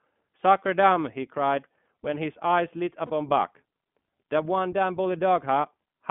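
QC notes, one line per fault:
throughout, iLBC codec: the speech sounds narrow, slightly rough and synthetic, with plainly audible coding damage and nothing below about 150 Hz or above 3.4 kHz. Each 20 ms frame's excitation is coded on its own at a low rate, which fits iLBC's 15.2 kbps mode.
3.06 to 3.11 s, lost iLBC frames: a brief held, faintly buzzy vowel-like sound replaces the speech for about 40 ms, which fits two lost frames. The decoder repeated the last pitch cycle mixed with noise, and the speech returns almost at once because each frame stands alone.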